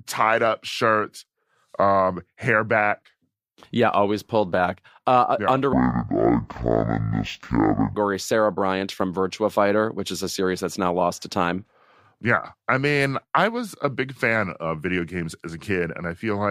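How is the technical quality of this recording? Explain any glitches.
The recording has one clear glitch. From 5.73 to 7.95 s, a stereo stream is read as mono: interleaved left and right samples are consumed in sequence as a single channel. Each moment therefore takes twice as long to play, so the speech runs at half speed and drops a full octave.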